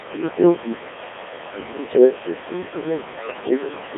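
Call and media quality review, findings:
Noise suppressor artifacts, whole clip: background pulled down by about 21 dB between phrases, swelling back under speech. Frame-by-frame band gating, with the room noise about 10 dB under speech feeding it.

Codec 2 vocoder, throughout: robotic, buzzy speech squeezed into a 300 Hz to 3.5 kHz band, heavily damaged. The waveform isn't carried. The decoder rebuilds sine-wave speech from pitch, voicing, energy and envelope, and the sound points to the 1.6 kbit/s mode.

Speech cut by the noise suppressor, 0.01 to 0.93 s and 1.52 to 3.97 s: soft consonants and word tails swallowed, dipping up to about 22 dB. Most of the first stretch is affected, and much of the second. The suppressor is treating quiet speech as noise and gating it out with the background.

Bit errors on digital voice radio, 3.20 to 3.51 s: sudden pitch and level jumps, tone-colour lurches, bleepy warbling gibberish. 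Fits a handful of corrupted frames at a few percent bit error rate. Each flipped bit skews a whole frame's synthesis parameters at this low rate.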